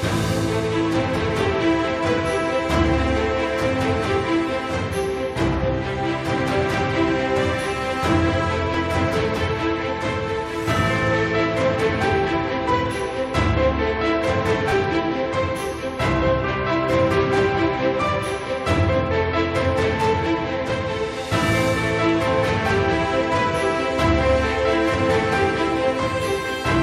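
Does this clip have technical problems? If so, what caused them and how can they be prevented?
Yes. Three brief skips, each a tiny jump in the waveform, occur at 8.74 s, 14.72 s and 20.70 s, spaced almost exactly 6 s apart. This is overlap between stream segments: adjacent 6-second segments carry time stamps that claim a few milliseconds of shared audio, so the player discards that stretch even though it was never duplicated. Generating segment time stamps from the true sample count, so boundaries meet without overlapping, prevents it.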